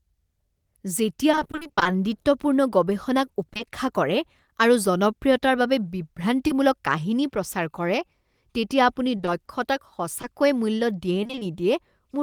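From 1.31 to 1.87 s there is repeated packet loss, giving a robotic sound. About half of this stretch is missing in holes up to 20 ms long, each patched by extending the preceding sound. The result is choppy speech with fragments dropped.

At 3.53 s a short concealed packet loss covers two back-to-back 20 ms holes, ending at 3.61 s. The decoder bridges the gap by continuing the last sound, heard as a brief smear. A single 20 ms loss at 6.47 to 6.51 s leaves a similar momentary wobble.

From 9.17 to 11.43 s the repeated packet loss returns more sparsely. Only about 8 percent of this span is concealed, again in holes of 20 ms or less. It causes choppy sound with pieces missing.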